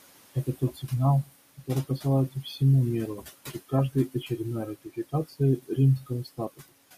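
A noise suppressor runs throughout, pulling the room noise, which sits about 15 dB under the speech, down by about 19 dB, leaving a residue that dips between phrases. At 0.34 to 0.89 s, 1.24 to 2.61 s and 3.16 to 6.73 s, speech is cut by the noise suppressor, which mistakes soft speech for noise. It drops those parts by up to about 20, 15 and 21 dB. Endings and quiet syllables sound swallowed, around a fifth of a second in the first span, a third in the second and a full second in the last.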